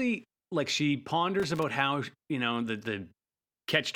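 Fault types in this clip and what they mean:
Loose connector crackle: a worn or dirty contact keeps cutting in and out as it shifts. That chops the signal into a ragged burst of scratchy crackle, here from about 1.39 to 1.63 s, right after "like she" and before "how you know the".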